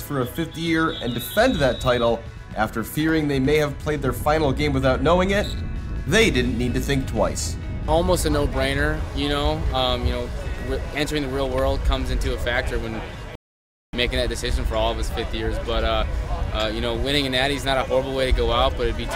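At 13.35 s the sound cuts to silence and stays silent until 13.93 s. Then it picks up exactly where it stopped. This is a rebuffering stall. The player ran out of downloaded audio and had to wait for more data before it could continue. No material is skipped or repeated. The gap simply adds about 0.58 s to the running time, heard as a clean pause followed by a seamless restart.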